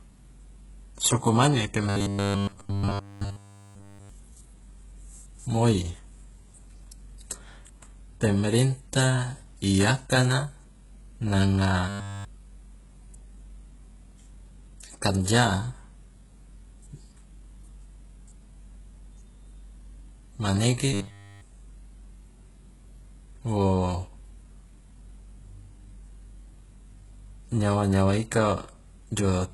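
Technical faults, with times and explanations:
Throughout: HE-AAC compression, likely the cause of the heavy codec damage heard across the speech. The damage suggests a very low bitrate of around 12 kbps. The upper band has been synthesised by copying lower bands upward under a coarse envelope rather than coded directly. Its harmonics do not line up with those below the crossover, so sibilants sound gritty, metallic and lispy.
1.89 to 4.09 s, 11.89 to 12.25 s, 20.93 to 21.41 s: robotic sound from repeated short buffers, likely caused by audio arriving too seldom. Essentially all of each span is filled by looping the last fragment of about 10 ms while the real audio is skipped. Those repeats impose a fixed 100 Hz buzz on the speech, turning it into a rigid, metallic drone that only loosely follows the original syllables. The first span is the longest.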